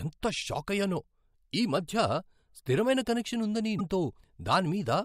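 A speech clip with one brief glitch at 3.78 to 3.81 s, where the audio jumps ahead and the speech comes out disrupted for about 28 ms, roughly one 24 ms frame. This is likely a broken MP3 bit reservoir: after a cut, the next frame reached back for borrowed bits and decoded bytes from the wrong frame. On the waveform it shows as an abrupt discontinuity.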